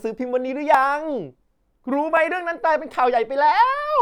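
A block of digital silence hits this speech at 0.74 s and again at 2.17 s. Each dropout lasts about 0.67 ms, which fits a 32-sample block of zeros left when the output buffer wasn't filled in time. The abrupt cut and return produce a brief tick.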